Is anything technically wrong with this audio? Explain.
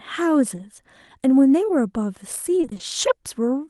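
Yes, there are two packet-loss problems. At 0.55 to 0.59 s, a short concealed packet loss: about 20 ms never arrived, so the decoder extended the last sound, giving a brief smear. From 2.61 to 2.81 s, repeated packet loss with robotic sound: holes of up to 20 ms keep recurring, and about half that stretch is patched, so the audio turns choppy.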